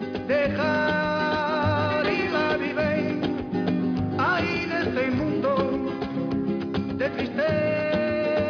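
Listening closely, nothing in the audio stood out as a technical problem at any point.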